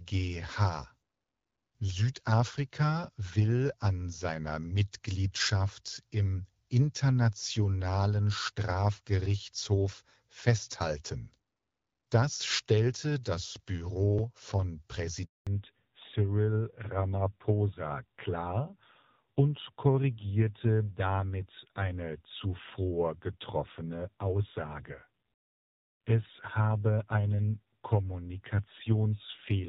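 A handover gap at 15.25 s cuts this speech recording to silence for 220 ms, until 15.47 s: the call was being switched between networks, no speech frames arrived during the move, and whatever was said in that window is gone. From 15.47 s to the end, a fallback to narrowband takes over. The call leaves the HD Voice wideband codec, whose light coding loss before the switch fits AMR-WB at 12.65 kbit/s, for an older narrowband one that sounds like AMR-NB around 7.4 kbit/s. Nothing above 4 kHz survives, so the speech turns muffled, duller and rougher for the remainder.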